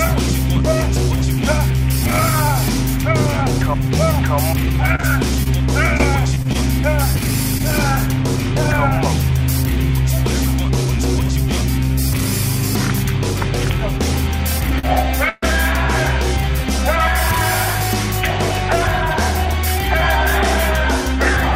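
Repeated packet loss, heard as a robotic sound, runs from 4.95 to 7.61 s. Packets kept failing to arrive in time, so the receiver patched each hole by extending the sound just before it, and the next hole came soon after. About 220 ms in total was filled in this way and roughly 120 ms of the original is gone for good. No single hole is longer than 31 ms, but the rapid succession gives a choppy texture.

A short stall from a late packet occurs at 14.79 to 14.85 s. One packet missed its slot, the jitter buffer ran dry, and the receiver held the last sound for about 45 ms until the packet turned up, then carried on from the same point. Nothing is lost. The sound is briefly drawn out, with a faint buzz or dip, and everything after it plays 45 ms later than before.

A call audio freeze follows at 15.29 to 15.44 s. The sound hangs and is stretched into a fading buzz for 132 ms, never dropping to silence, then resumes exactly where it stopped, so nothing is missing but a 132 ms pause has been inserted. 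The likely cause is packets held up in transit long enough to empty the jitter buffer, leaving the receiver to extend the last sound until they arrived.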